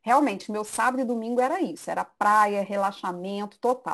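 A speech recording carries sample clock jitter from start to finish. The converter's clock wanders, so each sample lands a little early or late. The timing error is large, around 10 microseconds. A timing slip matters most where the waveform changes fastest. So the result is a gritty hiss that rides on the louder and brighter parts of the speech. It sits roughly 20 dB below the signal. In the pauses it disappears.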